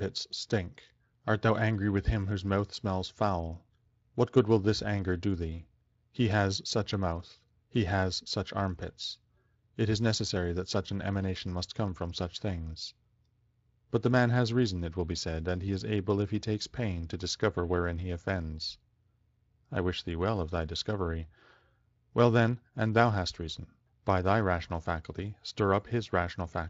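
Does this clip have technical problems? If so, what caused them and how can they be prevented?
No, there are no technical problems in this speech clip. It has been carried through the Speex codec, and the sound suggests a fairly high quality setting, since only a light trace of that coding can be heard.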